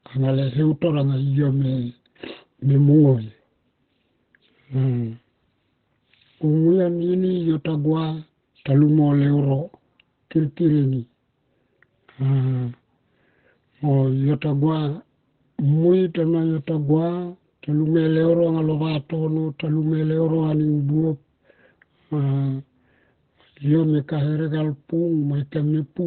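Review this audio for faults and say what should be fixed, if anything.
Throughout the speech, nothing sounds above about 4.3 kHz, and the voice comes across muffled and hoarse with heavy codec damage. This is likely Opus compression that has dropped into its narrowband speech mode, which fits a bitrate around 12 kbps. A plain low-pass filter would dull the top without the hoarse texture, and MP3 would swirl rather than roughen. Encoding at a higher Opus bitrate would keep the encoder out of this narrowband mode.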